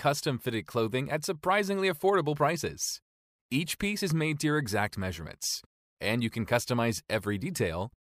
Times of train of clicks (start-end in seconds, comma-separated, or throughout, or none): none